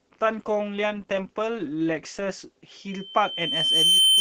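From the start to 2.71 s the speech plays as an adaptive stream starting at a low bitrate. The top end is thin and partly synthetic, and coding artefacts are prominent while the player holds a cheap rendition until it has measured the connection. At 2.71 s the quality steps up abruptly with no gap. The before-and-after difference points to a start near 16 kbit/s Opus moving up to around 64 kbit/s.

At 2.90 s a loudspeaker feedback squeal begins. A single tone at 3.1 kHz swells over roughly a second until it sits about 10 dB above the speech, and it runs to the end of the clip at 4.21 s. The microphone is picking up the loudspeaker it feeds, and at 3.1 kHz the loop gain exceeds one, so that frequency keeps reinforcing itself.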